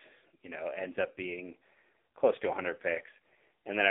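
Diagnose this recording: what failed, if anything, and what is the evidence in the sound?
The speech went through the AMR narrowband mobile codec at a low rate, probably near its 5.9 kbps mode, for the whole clip. The band runs from about 300 Hz to 3.6 kHz, and the thin pulse-driven vocal-tract model leaves the voice heavily buzzy and synthetic.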